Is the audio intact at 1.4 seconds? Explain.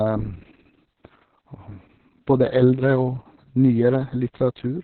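No. At 1.4 seconds the speech carries Opus voice compression, which runs through the whole clip. The SILK coder has narrowed the band, leaving nothing above about 4.3 kHz, and coarsely codes the excitation. The speech sounds muffled, hoarse and slightly robotic, which fits a bitrate near 6 kbps.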